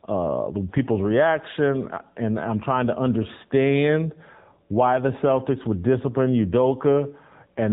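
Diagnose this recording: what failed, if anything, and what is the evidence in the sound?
The failure is at the codec stage. The speech has passed through the AMR narrowband mobile codec, and the damage is plainly audible throughout. Nothing above 3.8 kHz survives, so sibilants lose their edge and the sound is boxed in. The voice has a buzzy, synthetic grain. That comes from a vocal-tract model driven by sparse pulses per subframe. The coarseness fits one of the middle modes, near 8 kbps.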